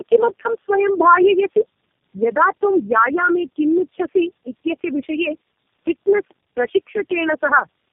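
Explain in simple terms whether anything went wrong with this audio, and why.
Tandem speech coding affects the whole clip. The speech sounds rough, muffled and warbly, like it was squeezed through several phone coders in turn.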